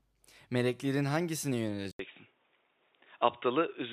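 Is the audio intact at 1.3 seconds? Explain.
Yes, the speech at 1.3 seconds is intact, with no audible fault at that moment.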